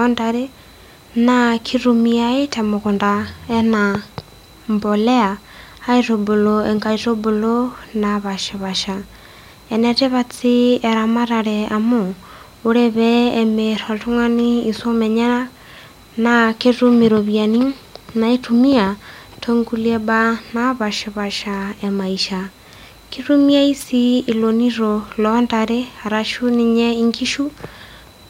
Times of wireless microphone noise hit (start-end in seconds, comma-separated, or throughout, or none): 23.79-23.84